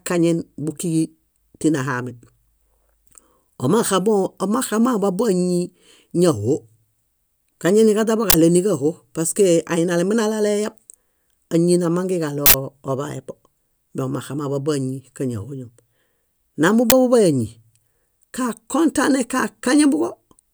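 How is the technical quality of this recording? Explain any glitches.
The recording is damaged by three short bursts of noise from an uninitialised buffer, at 8.30 to 8.34 s, 12.46 to 12.54 s and 16.90 to 16.92 s. Each time, the playback path sent a block out before any audio had been written into it, so whatever stale data sat in that memory was played as samples. The blocks last 40 ms, 80 ms and 20 ms, and each one replaces the speech with a brief, loud crack or blast of harsh digital noise.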